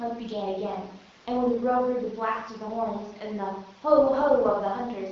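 No technical faults occur anywhere in this speech, which comes through an AMR wideband (HD Voice) path at 12.65 kbit/s with only light coding damage.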